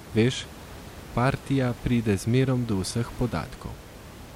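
No technical faults can be heard anywhere in the speech. The only thing beneath it is the room's own background noise, sitting about 18 dB below the speech.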